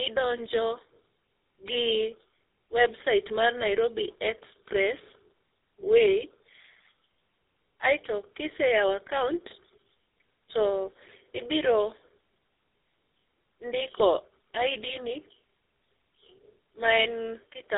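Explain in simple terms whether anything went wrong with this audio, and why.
Tandem speech coding affects the speech throughout. The sound passed through two phone speech coders in a row, likely a mobile one and then a GSM one, each squeezing the previous one's damage. That makes it rough, muffled and warbly, with nothing above about 3.7 kHz.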